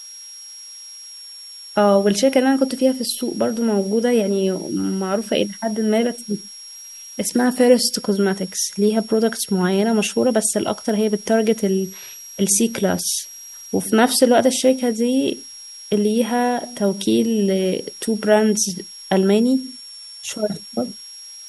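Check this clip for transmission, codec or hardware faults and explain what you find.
A hardware fault runs through the whole speech clip: a switching supply whistle. A thin high tone sits under the speech from start to finish, wandering between about 5.51 and 5.68 kHz, roughly 20 dB below the speech. A switching power supply is likely dropping into an audible burst mode or beating against another supply.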